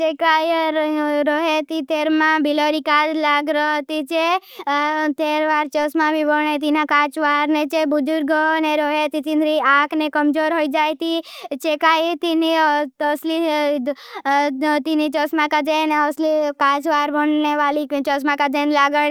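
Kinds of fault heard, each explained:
No transmission, recording or playback fault can be heard anywhere in the signal.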